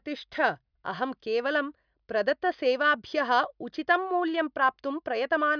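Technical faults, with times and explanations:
No technical faults are audible anywhere in this recording.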